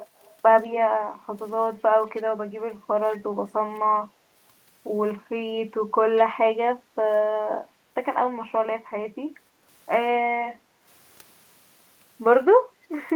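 A speech recording with two kinds of call-processing fault. Three brief scraps of echo leak appear at 0.17 to 0.33 s, 2.17 to 2.22 s and 6.17 to 6.22 s: a faint copy of the voice trailing 194 ms behind, roughly 25 to 35 dB under the speech and getting a little stronger each time. This is likely a far-end speakerphone whose echo canceller let some of its own loudspeaker output back into the microphone. On a spectrogram it shows as a weak ghost of the speech harmonics offset by that delay. The background is also gated by the echo canceller at 2.69 to 2.88 s, 6.81 to 6.95 s, 8.81 to 9.67 s and 10.57 to 10.85 s. There the room noise ducks by about 11, 7, 10 and 8 dB, the longest dip lasting most of a second, then returns as the canceller releases the microphone. On a waveform the noise floor visibly narrows at those points, and on a spectrogram the broadband background fades to a lighter band before filling back in.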